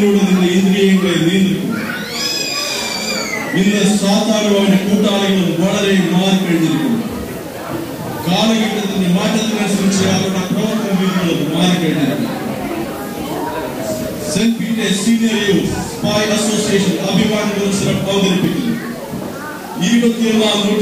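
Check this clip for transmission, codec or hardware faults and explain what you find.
One fault runs through the whole clip: low bit depth without dither. From start to finish the sound carries a grainy distortion that shifts with the signal, gritty on quiet passages, with the softest moments sputtering between two levels or dropping to silence. The likely cause is amplitude rounded to about 6 bits with no dither, leaving error roughly 25 dB below the signal. A zoomed waveform shows visible staircase steps, and a spectrogram shows broadband hash that tracks the sound rather than a steady noise floor.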